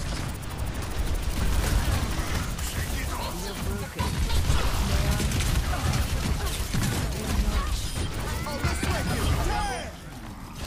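No dropouts, clipping, glitches or other transport faults can be heard anywhere in the clip.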